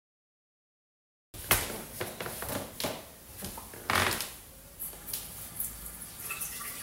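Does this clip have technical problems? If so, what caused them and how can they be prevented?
Yes. The clip has a cut-off start: digital silence runs from 0.0 to 1.34 s, then the sound enters abruptly mid-event with no natural attack, because capture began after the source was already playing. Start recording before the source begins.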